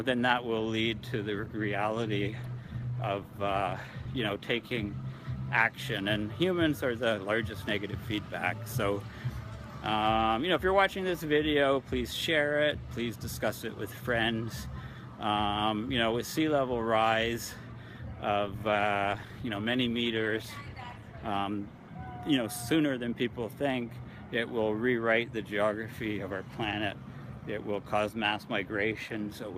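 Two call bitrate drops degrade the audio, at 1.32–5.38 s and 18.4–21.95 s. Each sounds coarser, duller and watery for roughly 4 s and 3.5 s, consistent with the encoder falling from about 64 kbps to near 23 and 20 kbps, then recovering.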